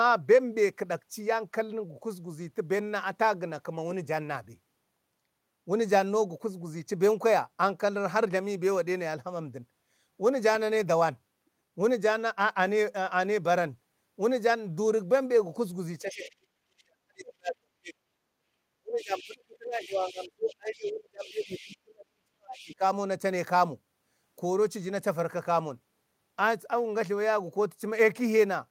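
From 16.01 to 18.26 s the speech is suppressed in double talk. It dips by roughly 40 dB, likely because the echo canceller couldn't untangle the two talkers and ducked everything. Inside that stretch, at 16.1 to 16.3 s, you get the other side's voice leaking through, faint at about 20 dB down. That's likely loudspeaker echo the canceller didn't fully remove. The same pattern comes back from 18.79 to 22.83 s, with drops of around 35 dB and leaked scraps at 19.01 to 19.37, 19.76 to 21.77 and 22.56 to 22.75 s, sitting about 20 to 25 dB under the speech.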